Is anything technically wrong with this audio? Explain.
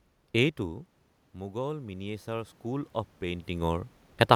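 Yes. From 1.49 s to 3.96 s there is automatic gain rising. The input dropped by about 12 dB, and the gain control slowly added about 7 dB to compensate. Voice and room noise swell upward together across those seconds. The level shifts near half a second and around 3 s come from the talker moving, not a fault.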